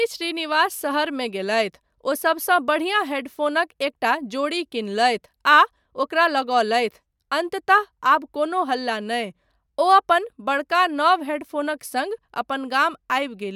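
No technical faults can be heard anywhere in the recording, and the signal stays continuous and intact throughout.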